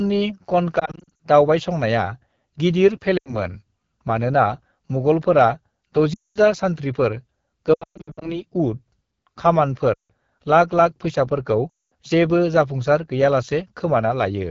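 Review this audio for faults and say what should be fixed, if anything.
Throughout, the speech sounds rough and raspy, with a gritty edge on every syllable. That is the AMR wideband (HD Voice) codec running at one of its lowest rates, around 8.85 kbit/s, where its pulse-driven vocal tract model has too few bits to shape the voice cleanly. Prevent it by negotiating 12.65 kbit/s or higher on the call.

At 0.79 to 1.20 s, 3.17 to 3.37 s, 6.13 to 6.39 s, 7.73 to 8.40 s, 9.93 to 10.11 s and 11.69 to 11.93 s, the speech warbles and drops out in brief gaps. These are lost AMR speech frames: corrupted frames failed their checksum, so the decoder stretched the last good pitch and vocal tract settings with falling gain. Losses run from 80 ms to 360 ms per event, and the 7.73 s stretch has a 120 ms unbroken run. Prevent them by improving radio coverage or link error protection.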